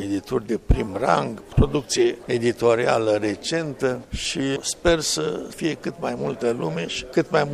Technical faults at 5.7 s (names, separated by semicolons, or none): none